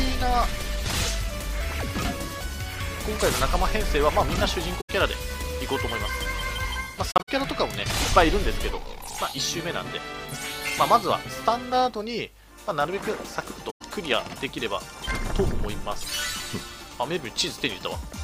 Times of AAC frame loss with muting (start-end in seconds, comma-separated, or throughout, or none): 4.80-4.90, 7.11-7.29, 13.70-13.82